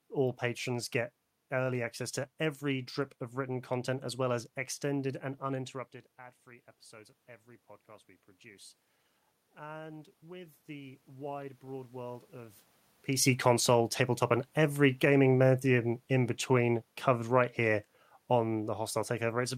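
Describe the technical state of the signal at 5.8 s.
At 5.8 s the signal is intact, with no dropout, distortion or level fault, only the room's own background noise and the talker's shifting distance from the microphone.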